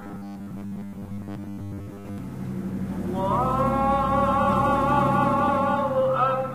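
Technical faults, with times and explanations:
0.01–2.18 s, robotic sound from repeated short buffers: the sound takes on a rigid, metallic buzz pitched at 100 Hz, while its rough outline still comes through. The likely cause is audio arriving too seldom, so playback fills the gaps by looping the last 10 ms slice and skips the real material. Roughly seven tenths of this stretch is repeated, and looping every 10 ms imposes that fixed 100 Hz tone.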